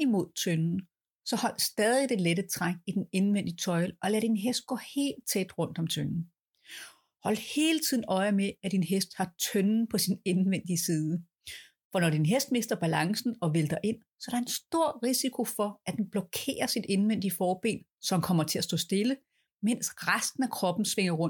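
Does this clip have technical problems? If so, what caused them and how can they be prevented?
No, this clip has no technical problems, so there is nothing caused that needs preventing.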